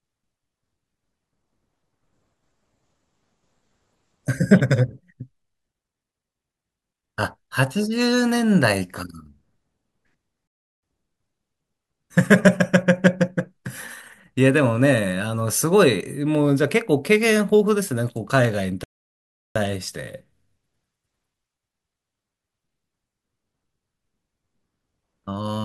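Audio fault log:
10.47–10.83 s and 18.84–19.56 s, rebuffering stall: the speech halts mid-flow and goes silent for about 0.35 s, then about 0.72 s, before continuing from exactly the point where it stopped. The player ran dry of downloaded audio and waited for more to arrive. Unlike a dropout, which skips material and leaves a gap in what is said, nothing here goes missing; the pauses only stretch the timeline.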